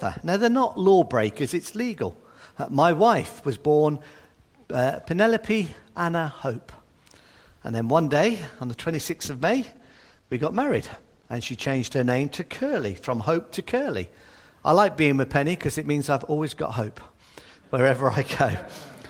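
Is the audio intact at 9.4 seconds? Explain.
No. A call bitrate drop runs from 8.69 to 13.33 s. The call's bandwidth estimate fell, so the encoder spent far fewer bits and coded the sound more coarsely, which fits a cut from about 32 to 16 kbps. The audio turns rougher until the rate recovers.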